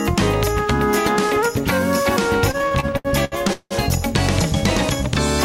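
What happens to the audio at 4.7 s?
Nothing goes wrong at 4.7 s; the audio plays through that moment intact, with no dropout, click or other fault.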